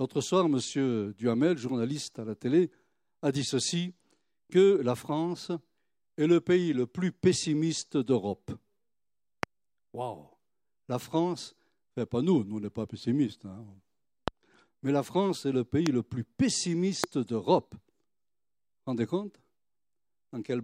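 A voltage spike, likely from a switch, plug or driver glitch, adds a loud pop, a sharp single thump well above the speech, at 9.43 s, at 14.28 s just before "mais la", from 15.86 to 15.89 s between "est le" and "le plus", and from 17.04 to 17.06 s, with the speech continuing underneath.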